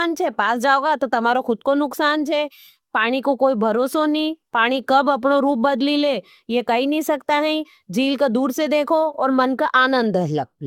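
From start to end the speech carries generation loss, likely from repeated lossy re-encoding, perhaps four passes through an AAC-type codec at a moderate rate such as 96 kbit/s. It sounds swirly and hollow with smeared consonant attacks. A spectrogram shows patchy holes and nothing above 17 kHz.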